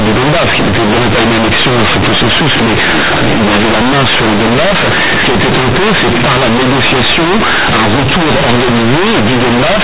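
Throughout the speech, loud buzzy distortion with strong noise in the pauses: companded audio read as linear, where A-law bytes are played as plain 8-bit samples without expansion.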